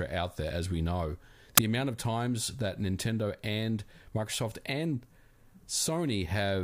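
At 1.58 s the speech is cut by a tiny burst of static. This is file tags played as audio. An embedded cover picture, stored as compressed data, was read as samples. It comes out as very loud white noise with hard edges, gone almost instantly.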